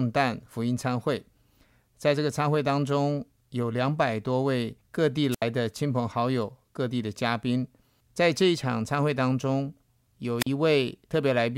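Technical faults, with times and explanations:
5.31–5.42 s and 10.39–10.47 s, wireless microphone squelch dropout: the radio link fades, hiss rises, then the receiver mutes for about 74 ms and 41 ms before the speech returns.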